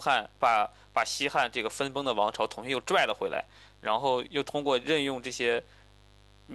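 A speech recording with mains buzz throughout: a steady, raspy 50 Hz buzz about 30 dB below the speech, whose sharp switching harmonics give it a grating edge unlike hum's smooth tone.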